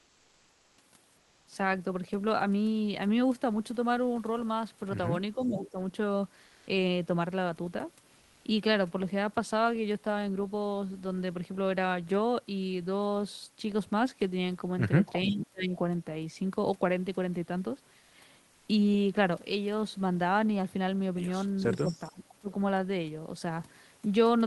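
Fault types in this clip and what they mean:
Comfort noise in place of the background: Four pauses, from 0 to 0.73 s, 1.21 to 1.45 s, 6.49 to 6.67 s and 18.01 to 18.13 s, lose the room's detailed background to a steady, featureless hiss shifted about 2 dB, likely from Opus discontinuous transmission.
Speech suppressed in double talk: The near talker dips while the far side is also active, likely because the echo canceller turns everything down. This happens mildly at 5.36 to 5.78 s, deeply at 15.25 to 15.76 s, briefly at 21.6 s, and almost to silence at 21.82 to 22.49 s.
Echo leak: Faint delayed copies of the far-end sound arrive 442 ms late and well below the main speech, at 5.41 to 5.70 s and 21.74 to 22.11 s. The cause is likely loudspeaker pickup that the echo canceller left uncancelled.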